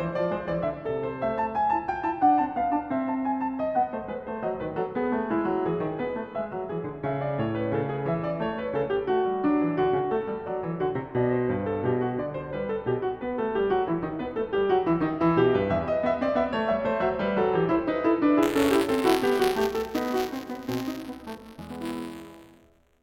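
From 18.42 s to the end, the music takes on a steady robotic buzz at 200 Hz, a fine rattle riding on everything that sounds. This is buffer tearing. The write and read positions in the ring buffer have drifted until they cross inside every period, so a small sliver of each one, a few percent, replays audio from about 20 ms earlier. The hard joins at either edge of that sliver repeat every 5 ms, which points to a period of roughly that length.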